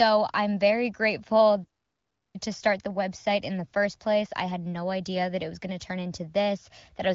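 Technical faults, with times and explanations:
1.64 to 2.36 s, playback stall: the player was likely starved of data or had its output thread held up, so nothing reached the output for about 0.7 s. The speech cuts off abruptly mid-flow into dead silence, then resumes after the gap. Across the join the audio keeps the AMR-WB wideband character, with nothing above roughly 7.4 kHz, since only the delivery stopped and the coding of the speech itself did not change.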